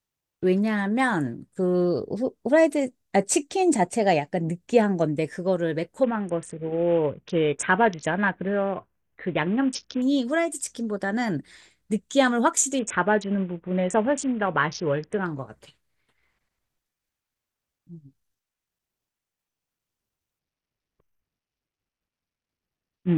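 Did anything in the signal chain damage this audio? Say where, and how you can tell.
Yes. A Bluetooth SBC bit pool drop damaged the codec stage. From 6.04 to 10.02 s, 12.79 to 15.26 s and 20.39 s to the end, the speech dulls and turns gritty. This points to a bit pool cut from 28 to 5, about 54 kbps, which starves the upper sub-bands.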